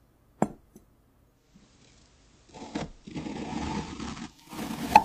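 From 1.28 s to 4.62 s the receiver shows digital radio blending to analogue: it lost the digital stream and cross-faded over about 370 ms to FM. A spectrogram shows faint hiss some 35 dB down, while the waveform level changes by about 1 dB.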